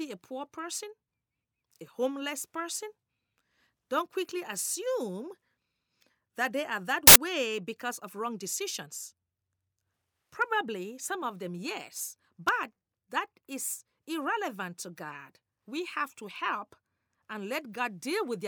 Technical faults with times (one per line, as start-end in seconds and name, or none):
7.07-7.16 file tags played as audio